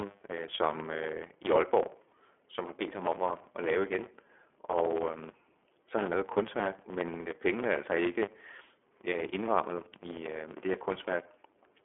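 A steady 100 Hz buzz runs under the speech from start to finish, and everything moves about 1.07 times too fast at roughly normal pitch. That is a block size mismatch (truncated): each written block, which fits 512 samples, loses its tail.

Throughout, the speech sounds rough and slightly synthetic, confined to a telephone band of 300 Hz to 3.4 kHz with nothing above 3.6 kHz. This is the iLBC codec, coding each 30 ms frame independently, which fits its 13.33 kbps mode, with plainly audible damage.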